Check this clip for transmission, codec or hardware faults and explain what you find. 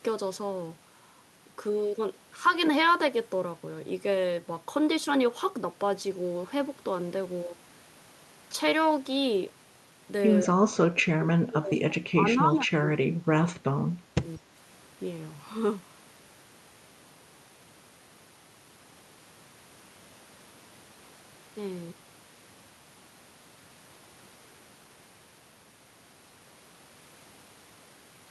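The speech has two stretches where it drops away. From 10.46 to 13.65 s it dips by roughly 30 dB for about three seconds. From 13.86 to 14.53 s it dips again, by roughly 20 dB, for a shorter spell. The likely cause is speech suppressed in double talk. Both sides spoke at once. The echo canceller could not tell this talker from the returning loudspeaker echo, so it turned everything down.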